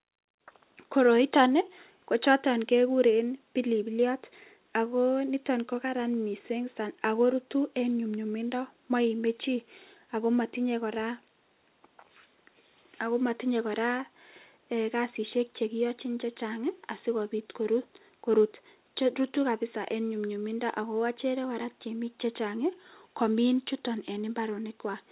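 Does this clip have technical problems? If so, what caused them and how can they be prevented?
No, there are no faults.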